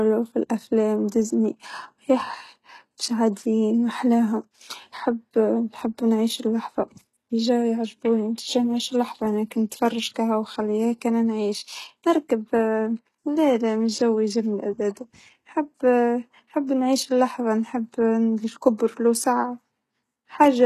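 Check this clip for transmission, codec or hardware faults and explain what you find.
One fault runs through the whole recording. From start to finish the speech has a gritty, metallic top end, with s sounds coming out lispy, and nothing at all above about 12.3 kHz. This is most likely HE-AAC compression: the codec keeps only the lower spectrum and fakes the treble by copying lower bands upward under a coarse envelope, so the rebuilt harmonics don't match. The plainly audible damage points to a very low bitrate, around 16 kbps.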